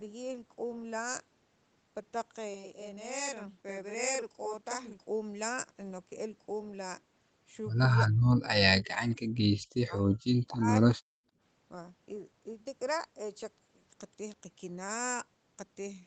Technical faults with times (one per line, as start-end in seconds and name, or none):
2.54-4.99 channel delay (doubling)
8.08-10.92 speech suppressed in double talk
9.10-9.15 echo leak
11.20-11.35 background gated by the echo canceller